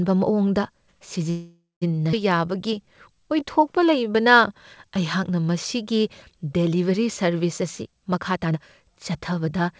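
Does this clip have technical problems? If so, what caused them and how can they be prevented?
Yes, there are four problems.

From 1.30 to 1.84 s there's a call audio freeze. The sound stretches into a fading buzz that ends in about 180 ms of silence, then picks up where it left off, so 516 ms of delay is added and nothing is lost. Packets were likely held up long enough to drain the jitter buffer. A steadier network path, or a slightly deeper jitter buffer, would ride out that kind of stall.

At 2.12 to 2.15 s playback skips ahead. Around a third of a second of audio is dropped, and the two sides are joined with only a tiny gap. That's audio dropped on the way or discarded by an overfull jitter buffer while later audio was already waiting. Letting the buffer shrink gradually, instead of dropping a chunk, avoids the jump.

From 2.37 to 5.43 s, just before "ꯃꯁꯤꯒꯤ ꯗꯦꯂꯤꯕꯔꯤ ꯁꯔꯕꯤꯁ", there's a jitter buffer slow-down. 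The audio runs at about 92% speed with the pitch unchanged, adding 260 ms while the receiver rebuilds its reserve by repeating pitch periods. A more stable network keeps the buffer from running low.

From 7.63 to 9.69 s, after "ꯃꯁꯤꯒꯤ ꯗꯦꯂꯤꯕꯔꯤ ꯁꯔꯕꯤꯁ", there's a jitter buffer speed-up. The audio runs at about 116% and sounds hurried, as the receiver trims short pieces, roughly 300 ms in total, to bring its delay back down. Reducing the bursty packet arrival that overfills the buffer would prevent it.

The call path itself carries nothing above 8 kHz, which fits a wideband call codec.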